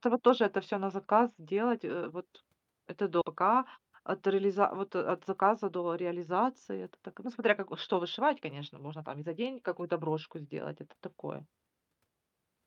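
At 3.21 s a skip ahead occurs: about a second of speech was dropped in transit or by the jitter buffer, so playback jumps forward, joining both sides almost seamlessly. From 3.45 s to 10.09 s, a jitter buffer speed-up trims surplus queued audio, removing about half a second in short pitch-period pieces, so speech runs roughly 8% faster at unchanged pitch, sounding hurried.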